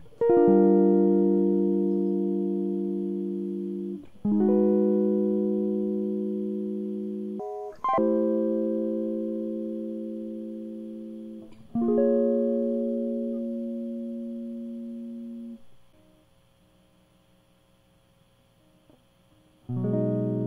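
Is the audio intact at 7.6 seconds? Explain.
No. From 7.40 to 7.98 s the music jumps an octave and races at double speed: audio read two samples at a time.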